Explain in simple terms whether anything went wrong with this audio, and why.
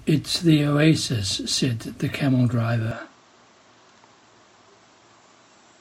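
A likely input switch to a poorer device happens at 2.91 s and lasts to the end of the speech. From that moment the sound turns duller and boxier, with nothing above about 7.7 kHz. It also gets a little quieter and picks up a faint new background noise. There's no gap at the change. The recording seems to have jumped from one microphone to a lesser one, which would explain why the tone, loudness and background all shift at once.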